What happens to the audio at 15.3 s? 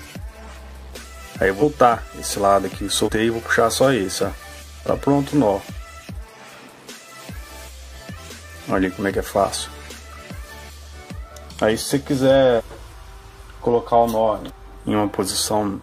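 Nothing goes wrong at 15.3 s; the audio plays through that moment without any audible fault.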